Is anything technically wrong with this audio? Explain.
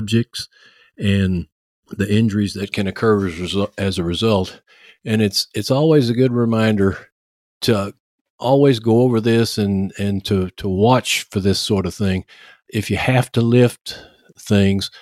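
Yes. For the first 2.6 seconds, up to "can occur as", there's channel delay causing comb filtering. One channel runs a fraction of a millisecond behind the other, and once the two are folded to mono the shared content cancels at a regular series of frequencies, the first dip sitting somewhere around 700 Hz with more spaced above it. That carves fixed notches through the speech, so it comes across hollow and phasey.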